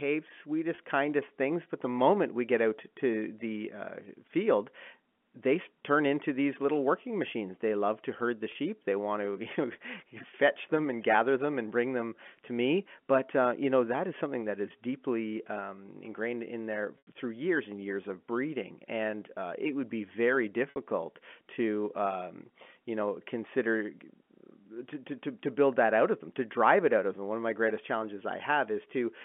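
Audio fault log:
0.75 s, 8.52 s, 16.98–17.07 s, 20.70–20.76 s: packet loss with pitch repetition. Gaps of 30, 30, 90 and 60 ms, consistent with 30 ms packets, are bridged by looping the last pitch period, giving a brief held, buzzy tone. At 16.98 s the loop fades to silence before the sound cross-fades back. On a spectrogram, the harmonics freeze into flat stripes within the 3.4 kHz telephone band. The waveform shows identical repeating cycles under a decaying envelope.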